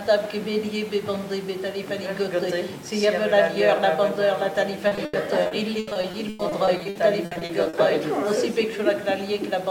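From 4.87 to 7.75 s, repeated packet loss makes the sound choppy and robotic. Many short gaps, up to 100 ms, are patched by stretching earlier sound.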